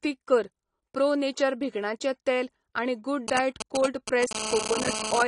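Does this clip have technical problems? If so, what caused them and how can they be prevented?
Yes. The speech sounds dull and smeared throughout, with nothing above about 10.3 kHz. That is likely AAC compression, at a bitrate low enough to fit 32 kbps AAC-LC. Use a higher bitrate.

From 3.28 to 4.33 s, GSM signalling bursts break in as galloping ticks and short 217 Hz buzzes, fairly loud against the speech. A nearby 2G phone is exchanging brief radio bursts with the network. Keep phones away from the recording gear.

From 4.35 to 5.23 s, a steady, raspy GSM phone buzz at 217 Hz sits about 4 dB below the speech. The phone's call transmission is being rectified by the audio circuit. Switch phones off or to flight mode.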